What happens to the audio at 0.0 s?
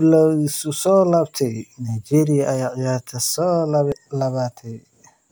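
Nothing goes wrong at 0.0 s; the audio is intact there, with no dropout, click or distortion at that moment.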